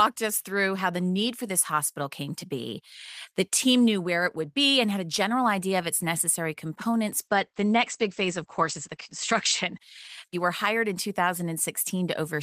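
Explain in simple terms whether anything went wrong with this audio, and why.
Something did go wrong, from about 7.2 s to 10.97 s: a call bitrate drop. The connection seemed to get squeezed, so the encoder had to describe the speech with far fewer bits. The speech turns rougher and duller, losing its crisp top end, with everything above roughly 8 kHz gone instead of reaching up to about 20 kHz. It's at its worst for nearly two seconds before clearing up again.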